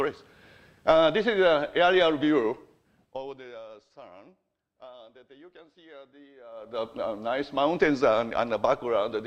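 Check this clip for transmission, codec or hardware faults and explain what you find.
There's one kind of fault here, zipper noise, twice. From 2.46 to 3.65 s the level drops about 25 dB, and from 6.50 to 6.85 s it rises about the same, in unsmoothed steps around 40 times a second (2 dB each on the rise). Every jump leaves a tiny click, so you hear a gritty zipping riding the fade.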